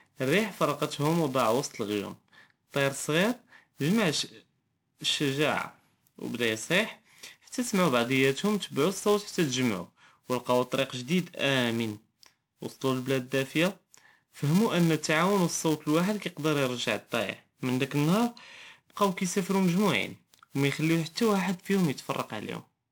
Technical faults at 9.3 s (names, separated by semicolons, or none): filter restarted on every block; generation loss